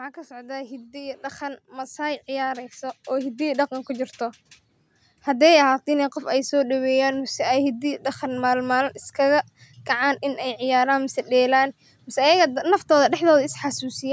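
From 0.27 s to 5.54 s the level climbs steadily by about 15 dB: automatic gain rising. The gain control judged the input too quiet and kept raising its gain, so the speech and the background noise swell together, within a call-processed band that stops at 8 kHz.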